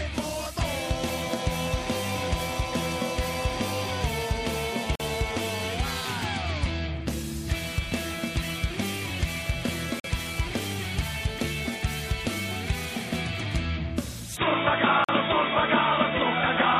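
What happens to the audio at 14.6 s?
From 14.37 s to the end at 16.79 s, the audio turns dull and boxy, with nothing above 3.8 kHz, a level shift of about 5 dB and a new, faint background noise about 30 dB below the signal. This is likely an input switched to a poorer device. The switch has no gap, and the changed noise floor and level set it apart from a simple low-pass filter.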